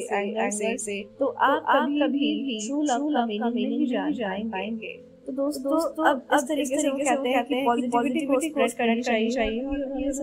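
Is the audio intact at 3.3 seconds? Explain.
No, at 3.3 s you're hearing a doubled audio track, and it runs through the whole clip. A second full-band copy trails by roughly 300 ms at about the same level, with no decay or room colour, likely from a slower second capture path mixed back in.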